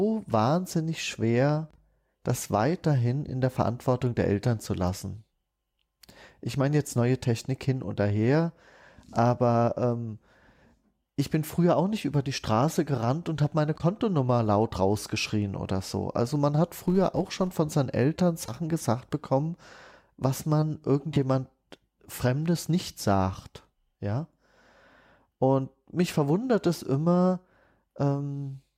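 From 16.74 to 17.54 s, between "man hat" and "von seinen", a filter restarted on every block produces a 200 Hz buzz that rises and falls with the speech level. The filter starts each block from silence, so it clicks at every boundary, showing as evenly spaced vertical lines on a spectrogram and regular spikes in the waveform.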